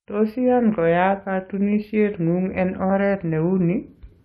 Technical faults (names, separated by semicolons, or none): none